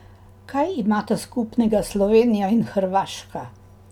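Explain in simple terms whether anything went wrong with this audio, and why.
Nothing went wrong here; the recording sounds just as it should the whole way, with nothing that needs fixing.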